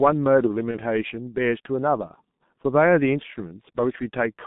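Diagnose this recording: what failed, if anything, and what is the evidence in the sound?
Codec stage: G.723.1 coding throughout, heard as a line band of about 150 Hz to 3.7 kHz, muffled hoarse speech and smeared consonants, consistent with its 6.3 kbit/s rate.

Network stage: VoIP packet loss concealed by the speech codec from 0.72 to 0.81 s. A fading extrapolation fits one lost 30 ms frame, and the speech stays degraded briefly afterwards.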